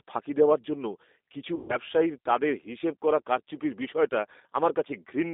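The whole clip runs through a G.729 codec, with speech squeezed into roughly 250 Hz to 3.7 kHz and a plainly rough, synthetic edge that fits an 8 kbit/s call. From 1.55 to 1.78 s, VoIP packet loss concealed by the speech codec covers about 140 ms of missing audio with a fading buzzy smear, and the voice stays weak briefly afterward.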